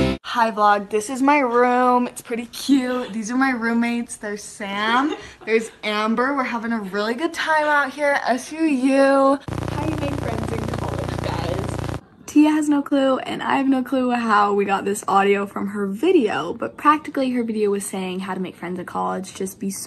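Nothing is technically wrong with this audio, which has come through a WebRTC call path with the Opus codec.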